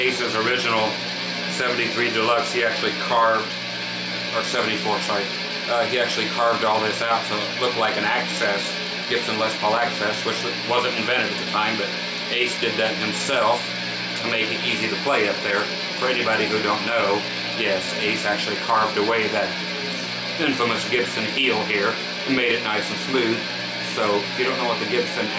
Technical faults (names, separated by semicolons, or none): none